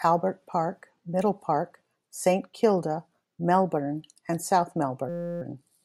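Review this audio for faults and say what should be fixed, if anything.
There's a system hang loop near the end, from about 5.09 to 5.42 s. The speech stops and you get a steady buzz at roughly 172 Hz. The driver or machine froze, but the audio hardware kept replaying the same 5.8 ms chunk of its ring buffer, which fits a 256-sample buffer, over and over for about a third of a second. Essentially no speech is lost; it just stalls and drones before carrying on. To prevent it, fix whatever is blocking the audio thread so it keeps feeding the buffer, and have the driver output silence instead of recycling stale data when it underruns.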